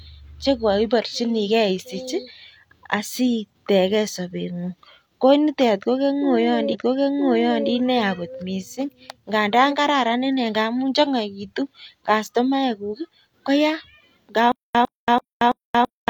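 At 6.69 s the speech jumps back and plays again. This is a stream segment repeated: the same segment was queued twice. About 0.98 s of audio repeats, running to 7.67 s. A small blip marks the jump back.

From 14.52 s to the end, a stutter with silent gaps takes over. A 104 ms burst returns four times. Each is followed by 229 ms of digital silence, a 333 ms cycle. The likely cause is a stalled stream replaying its last fragment. The speech meant for that stretch is lost.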